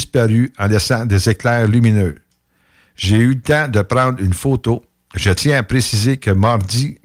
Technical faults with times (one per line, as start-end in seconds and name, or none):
none